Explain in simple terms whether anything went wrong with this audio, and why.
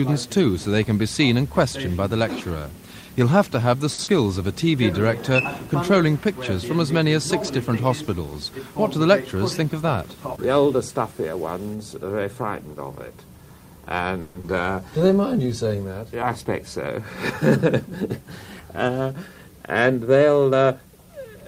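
Several network playback faults are audible.

At 3.93 s there is a short stall from a late packet: a packet arrived late, so the last sound was held for 50 ms before playback resumed with nothing lost.

At 4.04 s comes a short concealed packet loss. About 40 ms never arrived in time, and the receiver covered the gap with 30 ms of stretched-out sound, heard as a brief smear.

From 14.21 to 14.45 s the sound turns into a buzzy or hissy, fading continuation for about 220 ms, and 120 ms of audio is skipped. This is likely a long network dropout.

Between 14.97 and 15.76 s a jitter buffer slow-down repeats tiny slices to add 90 ms, so the audio plays at 90% speed and sounds drawn out at the same pitch.

There are three jitter buffer speed-ups, where short slices are cut out to reduce delay. They run from 8.98 to 9.71 s (6% faster, around 50 ms removed), 16.26 to 16.99 s (4% faster, around 40 ms) and 20.07 to 20.87 s (10% faster, around 100 ms). 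The first and last sound hurried at unchanged pitch.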